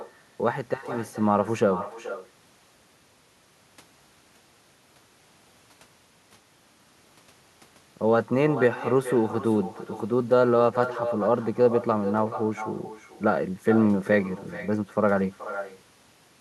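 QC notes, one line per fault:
Throughout: echo with no canceller. Each phrase of speech returns roughly 0.4 s later as a quieter, thinner copy, about 12 dB down. The far end's loudspeaker feeds its microphone unchecked. On a waveform every burst has a smaller trailing twin; the spectrogram shows faint delayed duplicates of each formant pattern.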